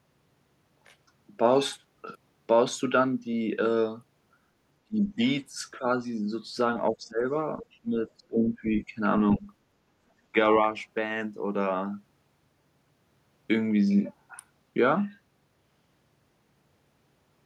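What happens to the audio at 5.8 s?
Speech suppressed in double talk, from 5.79 to 5.85 s: the speech briefly dips in level by a few decibels, a short sag of well under a tenth of a second. The likely cause is an echo canceller that could not tell this side's speech from the overlapping far-end echo and turned everything down.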